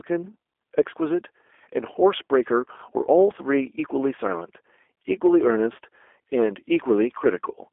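G.729 codec damage runs throughout: speech rebuilt at 8 kbit/s from filter, pitch and pulse models, nothing above 3.6 kHz, sounding rough, narrow and synthetic.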